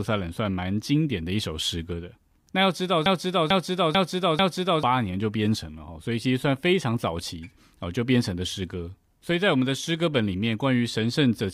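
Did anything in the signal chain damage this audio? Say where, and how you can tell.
Yes: a broken-record loop at 3.06 to 4.83 s. A 443.5 ms fragment repeats four times, likely from a stalled playback buffer replaying its last chunk.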